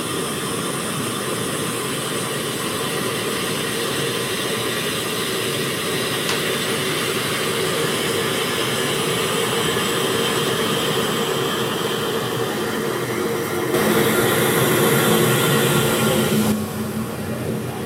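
At 13.74 s there's a sudden gain jump: the whole everyday sound, background noise included, steps up by about 6 dB at once and stays there until 16.52 s. Likely a gain setting applied in a single sample with no ramp.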